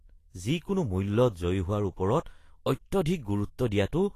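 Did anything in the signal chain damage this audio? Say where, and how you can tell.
Yes, at the codec stage, and the damage runs through the whole speech clip. Nothing is present above 14.2 kHz. The treble is hissy and grainy. Consonant attacks sound smeared. The damage is plainly audible from start to finish. The likely cause is Vorbis compression at a low quality setting, which fits a bitrate around 32 kbps. The encoder drops the top band and quantises the upper residue so coarsely that fine detail turns into noise.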